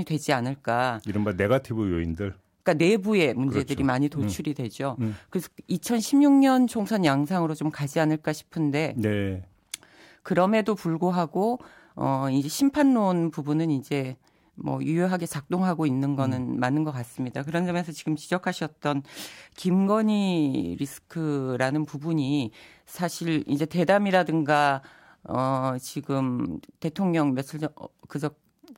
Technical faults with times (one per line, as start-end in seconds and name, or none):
none